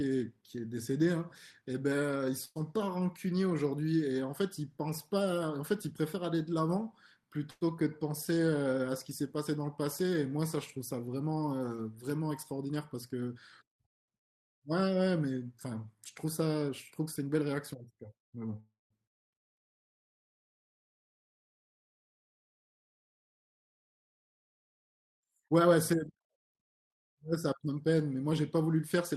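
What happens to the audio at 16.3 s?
A jitter buffer speed-up runs from 15.95 to 17.49 s, covering the moment at 16.3 s. The receiver's buffer had built up more audio than its target, so it trimmed short slices of one or a few pitch periods, again and again, to catch up. Around a tenth of a second disappears, and the speech plays about 7% faster over that stretch. The pitch stays the same, but the delivery sounds briefly hurried.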